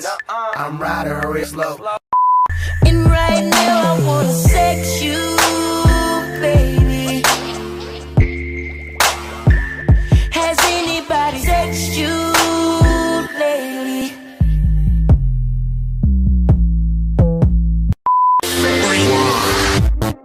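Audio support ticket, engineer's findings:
Compressed frames skipped at 1.43–1.48, 8.21–8.26, 9.81 and 11.43–11.46 s: audio jumps ahead roughly 0.1–0.3 s in 20 ms frame multiples. Decoder or file damage.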